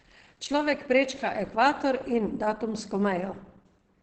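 Across the whole speech clip, the sound is muffled and hoarse, with plainly audible coding damage and nothing above 17.2 kHz. This is likely Opus compression in its speech-oriented SILK mode, which fits a low bitrate near 16 kbps.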